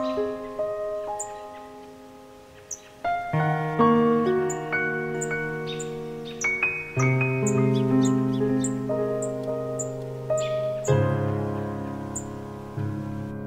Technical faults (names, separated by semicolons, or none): doubled audio track